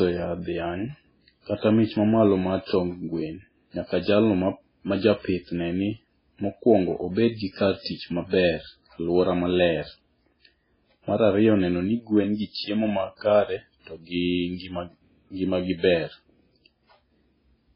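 From the start, the speech has heavy codec damage: nothing comes through above 5.3 kHz, and the remaining sound is watery and swirly, with weak detail flickering in and out between frames. This is most likely MP3 compression at a very starved setting, consistent with a bitrate near 16 kbps. Unlike a simple low-pass filter, which dulls the sound smoothly, this also makes the sound warble and smears sibilants and attacks.

From 1.58 to 1.63 s and again from 3.86 to 3.90 s, a short hiss arrives just before a sharp onset, spanning about 51 ms and then 42 ms. This is pre-echo. The attack landed late in a transform block, and the quantisation noise sized for that loud moment was spread back across the quiet part before it. The hiss comes only before the attack, and the attack itself is softened. That distinguishes it from a click or from reverb, which trails after the sound.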